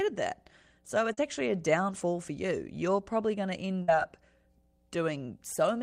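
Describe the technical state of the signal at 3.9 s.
At 3.9 s the signal is just coming out of a burst of packet loss that runs from 3.82 to 3.89 s. For about 56 ms the receiver stretches the last speech it got, fading it out as a held buzz or hiss. The speech then resumes with about 60 ms of material gone. It differs from a simple dropout because the gap is filled with a decaying copy of the preceding sound rather than silence.

Underneath this, and continuing through 3.9 s, is mains hum, a steady 60 Hz tone with low harmonics from power-line coupling, sitting faintly at roughly 35 dB below the speech. It differs from an electrical buzz because the tone is pure and constant, not rasping and rich in high harmonics, and it does not change with the speech.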